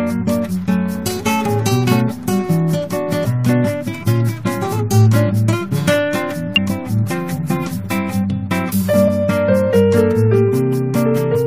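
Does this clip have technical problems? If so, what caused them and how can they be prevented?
Yes. Three times the audio lurches forward, at 3.24 to 3.26 s, 6.56 to 6.58 s and 9.07 s, each losing a short stretch of sound (roughly 70 ms, 100 ms and 50 ms). This is compressed frames skipped: whole frames were missing or rejected by the decoder as damaged, and the audio jumps ahead by their length. Preventing it means verifying file integrity after transfer and using error-protected storage or transmission.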